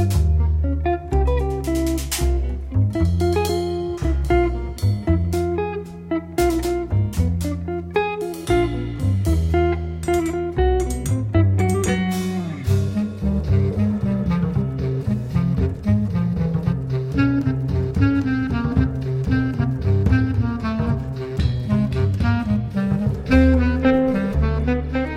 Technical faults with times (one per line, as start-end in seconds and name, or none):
none